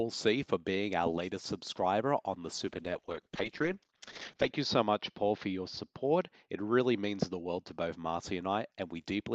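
A call bitrate drop begins at 2.66 s and lasts to the end of the clip. The bandwidth estimate on the Opus call path fell, so the encoder had far fewer bits to work with. The coarser coding points to a fall from about 32 kbps to 8 kbps, holding at its lowest for 1.82 s. The upper band also narrows from 12 kHz to 8 kHz, leaving the sound rougher, watery and duller.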